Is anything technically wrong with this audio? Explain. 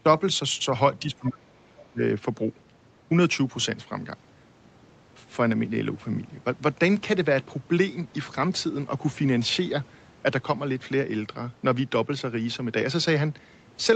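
Yes. Between 1.14 and 2.01 s the speech dips and breaks up. This is most likely speech suppressed in double talk, with an echo canceller attenuating the talker while the far end was also active. Cuts total about 0.7 s and reach about 25 dB at their deepest. On the waveform they show as sudden notches in the envelope, and on a spectrogram as vertical gaps through the harmonics.

Inside that same stretch, a second, fainter voice comes through twice, at 1.26–1.42 s at about 20 dB below the talker and at 1.78–1.82 s at about 30 dB below. It sounds like the other side's voice leaking through as residual loudspeaker echo. On a spectrogram it appears as weak, thin harmonic traces that don't line up with the main voice's pitch.

The spectrum stops at 8 kHz, which fits a wideband Opus call path and is normal for calls.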